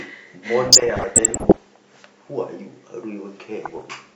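Speech with DAB burbling in two stretches, 0.65 to 1.66 s and 3.65 to 3.94 s. Weak reception let bit errors slip past error correction into the MP2 data. Wrong samples put short blips of noise into single sub-bands. The first burst is heavier, with roughly one to two percent bit errors, and the second is under one percent.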